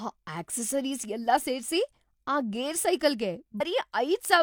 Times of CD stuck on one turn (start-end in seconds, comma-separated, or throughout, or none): none